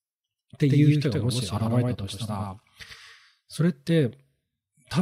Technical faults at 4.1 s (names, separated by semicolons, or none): none